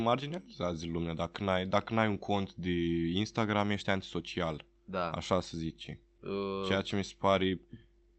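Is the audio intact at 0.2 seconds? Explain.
No. Faint hiccups and a slightly unsteady tempo run from 0.10 to 8.16 s: repeated timing corrections keep inserting tiny repeated slivers, slowing playback to 97% and adding roughly a fifth of a second. Underneath is clock drift between sender and receiver: the sender's clock runs about 3 percent slow, so the receiver's buffer keeps draining and must be padded out.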